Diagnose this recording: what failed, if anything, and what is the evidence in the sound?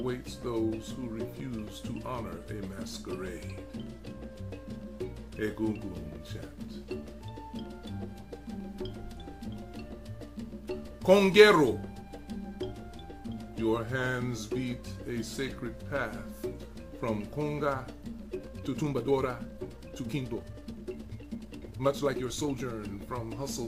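From 18.25 to 22.73 s, a time-stretched section plays 1.49 times faster, rushed, same pitch. Likely processing software dropped short pieces.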